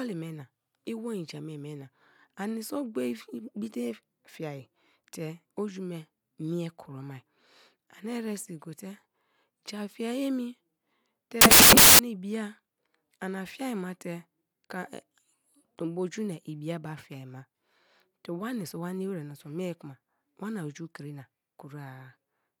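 At 11.41 s the speech drops out and a burst of loud noise takes over until 11.99 s, a bit over half a second. That's samples built from the wrong bytes: the reader assembled each sample from mismatched bytes, so the jittery low-order bits ended up as the big part of every value. What you get is a loud, harsh hiss.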